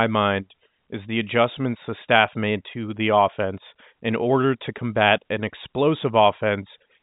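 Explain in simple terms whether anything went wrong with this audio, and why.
Nothing went wrong with this audio; it is ordinary telephone-quality speech, which naturally carries no sound above about 3.8 kHz.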